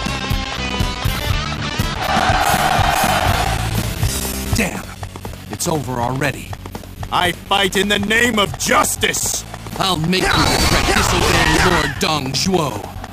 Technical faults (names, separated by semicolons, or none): periodic USB or driver dropouts